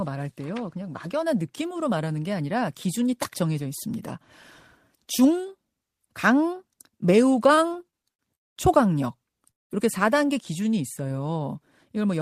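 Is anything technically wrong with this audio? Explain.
Yes, the speech has three packet-timing faults in close succession.

From 7.55 to 8.2 s there are repeated stalls (stutter). Late packets kept emptying the jitter buffer, so five gaps, the longest 61 ms, were filled, making the speech drag and stutter.

Call audio freezes occur at 8.35 to 8.57 s (213 ms) and 9.51 to 9.71 s (188 ms). Each is near-silent, likely from packets held up until the jitter buffer ran dry, after which speech resumes where it stopped.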